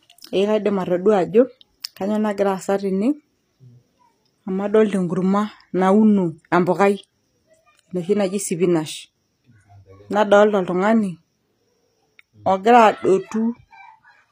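A speech recording that has likely passed through HE-AAC compression at a low bitrate, consistent with about 24 kbps, for its whole length. Its treble is rebuilt from copied lower bands rather than coded, so s sounds turn gritty and metallic, with nothing above 15.5 kHz.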